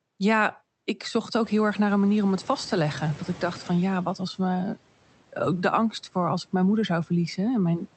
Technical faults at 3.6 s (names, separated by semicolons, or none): noise suppressor catching up